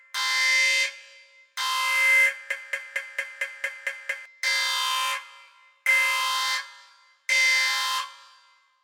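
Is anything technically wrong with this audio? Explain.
Yes. From 2.51 s to 4.26 s there is a broken-record loop: a fragment about 227 ms long plays eight times in a row, each repetition identical and butted directly against the next, so the sound stutters mechanically instead of moving forward. The likely cause is a stall in the player, encoder or stream that kept re-sending the last buffered chunk. Whatever audio belonged in that stretch is missing, and the clip resumes only after the loop ends.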